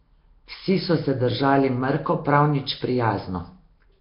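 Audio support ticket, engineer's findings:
Likely Nellymoser compression in the capture path, throughout. Fixed two-bit-per-sample block coding, heavy damage; rate fits about 22 kbps. Weak bands starved of bits, refilled with noise. Nothing above 5.3 kHz. Speech carries a rough, hissy halo, smeared and underwater-sounding.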